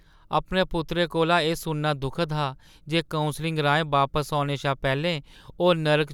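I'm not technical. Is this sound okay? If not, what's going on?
Yes, this sound is okay, with nothing wrong to point out.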